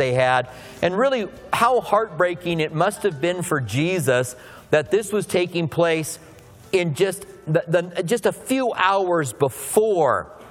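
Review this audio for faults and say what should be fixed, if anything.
At 6.17 s there's a tiny hard-edged dropout, a gap between stream segments. It lines up with a boundary between 6-second segments: the timestamps of the next segment start about 5 ms after the previous one ends, so the player pads that hole with digital silence. Nothing is actually missing from the sound, but the abrupt cut in and out reads as a little tick. Worth fixing by making the packager stamp each segment to start exactly where the last one finished.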